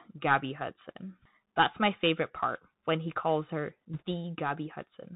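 A speech clip, carried through the Bluetooth CVSD headset codec from start to finish. Nothing above 4 kHz survives, so the sound is narrow and boxy. The one-bit delta coding lags on loud, bright sounds. S sounds turn scratchy over a grainy hiss, which fits a 64 kbps CVSD link. From 3.93 to 4.02 s, bit errors on the Bluetooth voice link add a brief rushing crackle. Each flipped bit only nudges the step, so there are no sharp clicks. The density points to an error rate near one or two percent.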